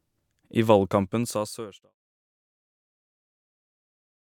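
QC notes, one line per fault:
Nothing to flag here; the speech just eases out in a smooth fade that starts around half a second in and is gone by 1.95 s, with no click or hard edge at the end.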